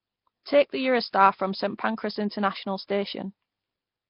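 Speech with a rough, hissy halo and a smeared, underwater quality throughout, and nothing above about 5.3 kHz. The likely cause is Nellymoser compression, heavily applied: weak bands starved of bits are filled with noise, in a way that fits a rate near 22 kbps.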